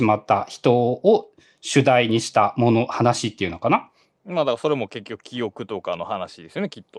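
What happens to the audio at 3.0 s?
Nothing goes wrong at 3.0 s: the speech plays through that moment intact, with no dropout, click, distortion or other fault.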